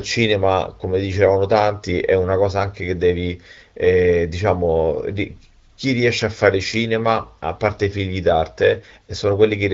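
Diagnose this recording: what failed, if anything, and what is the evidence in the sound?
Nothing in this recording has failed at any stage of the chain. The speech carries the sound of the AMR wideband (HD Voice) codec at 12.65 kbit/s, which keeps it clear with only a light coding texture.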